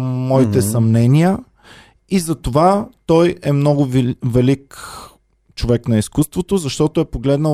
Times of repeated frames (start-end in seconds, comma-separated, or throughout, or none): none